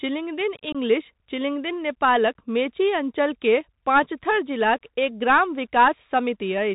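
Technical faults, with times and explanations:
Throughout: Bluetooth CVSD headset codec. The audio went over a narrowband headset link that codes each sample as a single up-or-down bit with an adapting step, which fits a 64 kbps CVSD stream. Nothing above 4 kHz survives, so the speech sounds boxed in. Where loud, bright sounds rise faster than the step can follow, they smear and distort, s sounds turn scratchy, and a grainy hiss sits under the voice.
0.72 to 0.76 s: unconcealed Bluetooth headset packet loss. About 22.5 ms of voice data, a few packets' worth, was lost on the headset link, and nothing filled the gap with plausible sound. The speech drops out abruptly, leaving a short hole with hard edges. Because the CVSD decoder's step size has to rebuild after the gap, the speech returns quieter for a moment before recovering.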